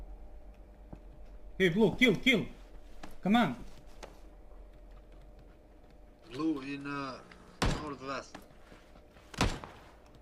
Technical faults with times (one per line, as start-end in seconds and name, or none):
none